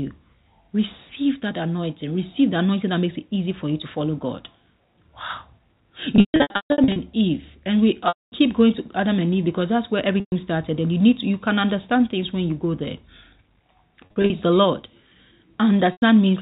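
Packet loss with pitch repetition hits at 6.16–6.96 s, 8.08–8.32 s, 10.20–10.32 s, 14.06–14.30 s and 15.92–16.02 s. The receiver bridges each gap by repeating the last pitch period, heard as a held, buzzy tone. The longer 8.08 s gap fades into silence before the speech cross-fades back.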